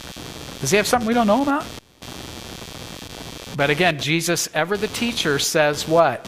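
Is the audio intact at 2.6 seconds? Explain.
No. At 2.6 seconds the speech carries computer activity noise, which runs through the whole clip. Changing processor, graphics or mouse load disturbs the ground the audio circuit shares, and a buzzing, chirping texture pulsing around 150 times a second rides roughly 15 dB below the speech, following the computer rather than the talker. A spectrogram shows evenly spaced harmonic lines persisting through pauses, and the waveform shows small regular spikes between syllables.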